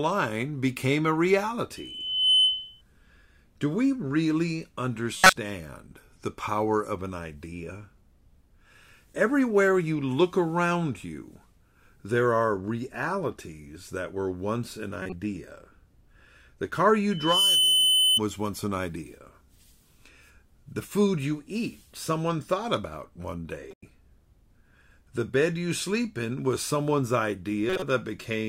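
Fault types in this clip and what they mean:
Loudspeaker feedback squeal: A microphone picks up its own loudspeaker, and one frequency keeps reinforcing itself. Here a 3 kHz tone swells up over a fraction of a second, from 1.76 to 2.82 s and from 17.11 to 18.20 s. It sits well above the speech.
Corrupt frame decoded: Damaged compressed frames were played anyway, so energy lands at the wrong frequencies. Short blips or noise bursts of roughly a tenth of a second cut through the speech at 5.17, 15.02, 23.71 and 27.70 s. They vary from loud to faint.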